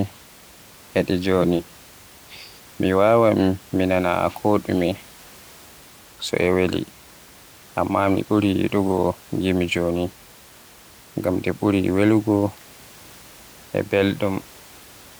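Nothing stood out on listening to this speech, apart from a room noise sitting about 26 dB below the voice that belongs to the recording space rather than to the system.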